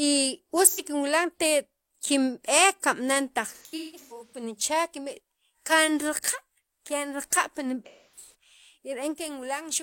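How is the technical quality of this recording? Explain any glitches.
The speech has three glitches from AAC frame loss with concealment. At 0.67 to 0.87 s there is a brief smeared, noisy patch. From 3.55 to 4.43 s and again from 7.86 to 8.32 s, the sound turns phasey and blurred in scattered bursts. Around 85 ms of audio went missing in the first event, which fits two lost frames. In the later events the gaps are spread across roughly 0.77 s and 0.51 s, with the longest runs around 150 ms and 300 ms. At each gap the decoder rebuilt the missing audio from the last good spectrum instead of the real signal.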